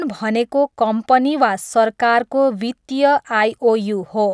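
Nothing in the speech recording stands out as a technical fault; there are no glitches, dropouts or other audible problems from beginning to end.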